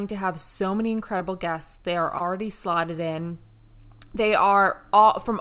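A speech recording carried over a call link, with nothing above 4 kHz, which points to a narrowband codec such as G.711. Two dropouts show short concealed packet loss. Right after "to have so many", at 1.18 to 1.22 s, about 20 ms of audio went missing. The receiver patched it by extending the preceding sound, leaving a brief smear. The same happens at 2.18 to 2.22 s, just before "slotted in".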